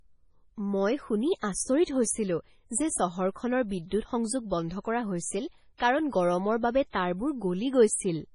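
Speech runs throughout with the heavy, watery smearing of MP3 compression, likely from a low-bitrate encode, which fits something around 24 kbps. Nothing is left above 10.6 kHz, yet this isn't simple band-limiting. Below that ceiling, weak frequency components drop in and out from frame to frame, which gives the swirly, metallic texture on sibilants that a plain low-pass filter never produces. There are two pre-echoes. The first runs from 1.37 to 1.43 s, about 53 ms, between "মই শুনি" and "আচৰিত হৈছিলো যে চহৰখনৰ". The second runs from 5.77 to 5.80 s, about 28 ms, just after "কৰা হৈছিল". In each, a short hiss leads into a sharp onset that sounds blunted. The codec has spread noise meant for the loud attack across its whole block, into the quiet moment before it. Reverb or echo would instead trail after the sound.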